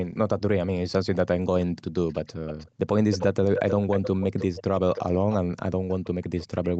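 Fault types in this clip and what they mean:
Echo leak: a loudspeaker-side echo canceller likely failed to remove its microphone pickup, so the speech returns 312 ms later in fluctuating scraps and longer stretches, roughly 5 to 20 dB below the speech.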